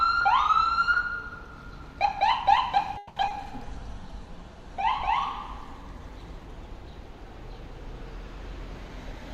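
At 2.97 s the sound freezes for 0.19 s, until 3.18 s. The last sound carries on as a fading buzz or hiss rather than dropping to silence. When the audio resumes, it picks up exactly where it stopped. Nothing is lost, but the rest of the clip now runs 190 ms later. This is a call audio freeze. The likely cause is packets held up in transit, so the jitter buffer ran empty and the receiver stretched the last sound to cover the wait.

Between 3.28 and 3.46 s comes a short concealed packet loss. About 20 ms of audio never reached the decoder in time. The receiver filled the hole by extending the preceding sound, then blended back into the real signal. It is heard as a brief smear or wobble. The patch-up adds only a few milliseconds, so the timing barely shifts.

From 3.65 to 5.19 s there is a call bitrate drop. The sound turns coarser and duller, which fits the encoder being pushed from around 64 kbps down to around 28 kbps. 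At that lower rate the top of the spectrum is cut, and the audible bandwidth shrinks from 20 kHz to 12 kHz. The degraded quality holds for about 1.5 s before the fuller sound returns.

From 8.43 to 9.30 s the audio runs fast. This is a jitter buffer speed-up. The buffer was holding more audio than it aims for. To shed that delay, the receiver cut out short pitch-period pieces many times in a row. Playback rises to about 107% speed while the pitch stays the same. About 70 ms is removed in total, and the sound feels hurried.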